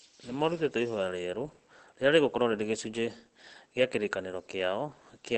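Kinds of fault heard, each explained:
Opus compression: the speech sounds muffled and hoarse with nothing above about 8.3 kHz, unlike MP3's swirling, which points to the likely speech-mode coding at a low bitrate such as 16 kbps.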